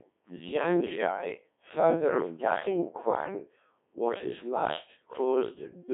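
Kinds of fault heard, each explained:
Codec 2 vocoder: speech rebuilt from pitch and envelope, buzzy and robotic, consistent with 1.6 kbit/s; the spectrogram shows only 200 Hz to 3.6 kHz, nothing above 3.8 kHz.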